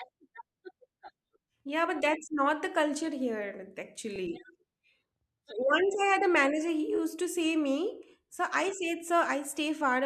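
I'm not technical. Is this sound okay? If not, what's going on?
No. Right after "not the culture here", at about 4.15 to 4.18 s, there is a repeated frames fault. A tiny slice of the speech, 24 ms long, which fits a single compressed frame, was stored or sent twice, so the player plays it once more. You hear a very brief stutter or hiccup in the speech, and everything after it arrives 24 ms later than it should.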